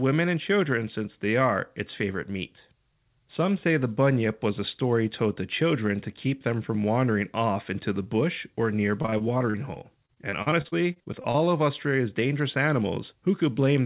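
From 9.02 to 11.36 s, just after "into the bush or", the call suffers repeated packet loss: audio packets keep arriving late or not at all, and the receiver covers each hole by extending the last sound it had, for about 0.43 s of patched audio in all, some 18% of that stretch, with the longest single gap 40 ms. The speech, already capped at 4 kHz by the narrowband call path, turns choppy and robotic, with pieces missing.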